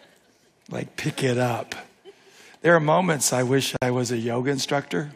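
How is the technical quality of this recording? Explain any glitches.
There is one glitch, a gap at a join of encoded pieces, from 3.77 to 3.82 s. The sound stops for about 52 ms and then resumes exactly where it left off. Separately encoded segments were joined untrimmed, so the encoder's start delay and last-frame padding survive as silence. The codec smears its edges. Unlike a dropout, nothing is missing.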